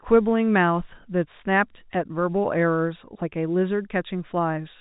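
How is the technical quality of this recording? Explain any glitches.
Nothing stood out on listening; the speech comes across as ordinary telephone-band audio with no glitches to explain.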